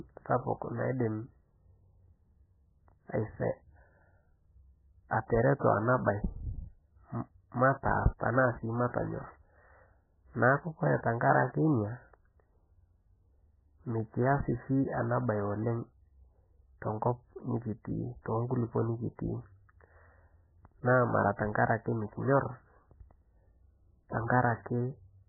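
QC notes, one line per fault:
Throughout, MP3 compression: the speech stops dead at 2 kHz and swirls watery and heavily, likely an encoder starved at a very low bitrate, around 10 kbps.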